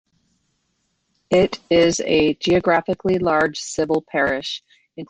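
Listening to the speech recording, nothing technical stood out as a problem.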